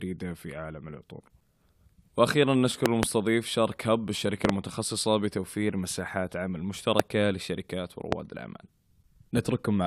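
Loud pops at 2.86–3.05 s and 4.45–4.52 s (each a double pop), then single pops at 7.00–7.02 s and 8.12–8.15 s, break into this speech clip, peaking about 25 dB above it (the last about 20 dB), while the speech carries on underneath. Each is likely a sudden voltage step from a plug, switch, static or driver glitch.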